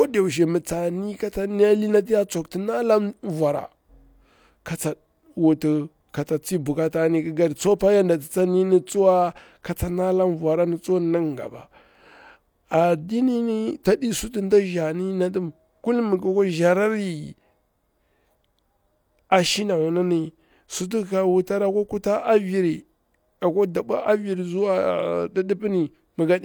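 No technical faults can be heard anywhere in this speech recording, and the signal stays steady and intact throughout.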